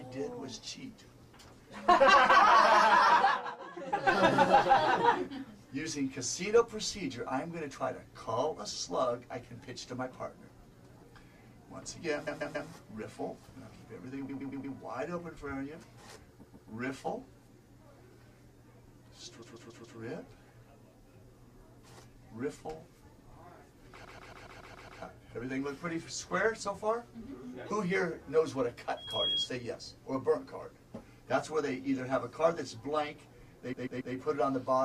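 At 12.26, 14.28, 16.42, 19.41 and 24.04 s the sound stutters from repeated frames: a short block of compressed audio, 139.3 ms long (116.1 ms at 14.28 s), plays again two to seven times. The block length points to a run of about five or six codec frames. Unlike a dropout, nothing is lost; the passage grows longer, by nearly a second at 24.04 s.

From 28.97 to 29.50 s a loudspeaker feedback squeal appears. A single 3.3 kHz tone swells over about a third of a second until it is roughly as loud as the surrounding sound. A microphone was picking up its own loudspeaker, and that frequency kept gaining around the loop. A steady interfering tone would not do this: the squeal grows by itself from nothing rather than sitting at a fixed level.

At 33.72 s the repeated frames return, with a 139.3 ms block played three extra times before the sound moves on.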